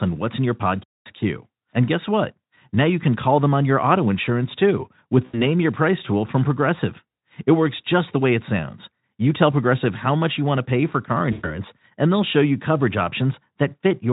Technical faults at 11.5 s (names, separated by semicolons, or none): VoIP packet loss concealed by the speech codec